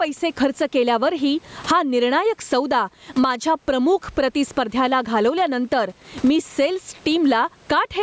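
Gain pumping runs through the whole clip. The gain swings by around 15 dB. Levels sound squashed together. The likely cause is input gain set far too high, with a fast limiter clamping each peak.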